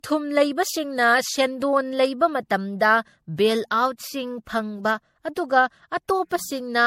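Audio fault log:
throughout generation loss: likely about seven MP3 re-encodes near 64 kbit/s, compounding quantisation noise, so speech sounds swirly, hollow and smeared, with nothing above 16.5 kHz.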